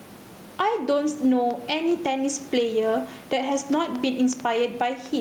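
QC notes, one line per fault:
Throughout: gain pumping. The level of the room noise swells by roughly 10 dB in the gaps between phrases and drops back under each loud syllable, so the speech sounds squashed and breathing. The likely cause is input gain set far too high, with a fast limiter or compressor clamping every peak. On the waveform the envelope looks flattened, with quiet stretches rising toward the speech level. On a spectrogram the broadband noise floor brightens in pauses and darkens under speech.
1.51 to 5.2 s: train of clicks. Sharp, near-identical ticks arrive about 3 per second at an uneven spacing, peaking about 5 dB above the speech and remaining audible through pauses as well as over words. This is likely interference from nearby equipment or a faulty connection or power supply injecting pulses. On the waveform each click is a narrow spike standing above the speech envelope. 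On a spectrogram each one is a thin vertical line spanning the full frequency range, set against room noise sitting about 32 dB below the speech.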